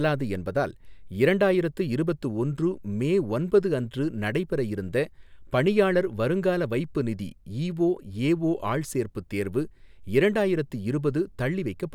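No audible technical faults.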